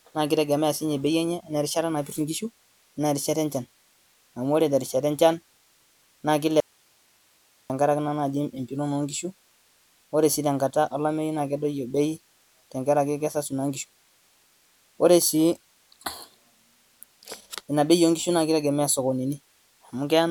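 The speech signal was likely lost upstream while the path after the break stayed live, causing an audio dropout to a faint residue from 6.60 to 7.70 s. For about 1.1 s the speech cuts out abruptly, leaving only hiss roughly 40 dB down.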